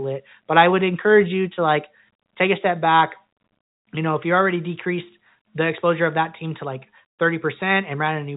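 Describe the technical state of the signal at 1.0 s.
At 1.0 s the speech is intact, carried through ordinary G.711 telephone coding that leaves nothing above about 3.8 kHz and only a faint quantisation noise following the signal level.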